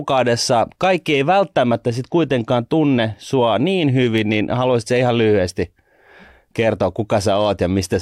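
Listening to this speech recording, nothing stood out as a technical problem at any point.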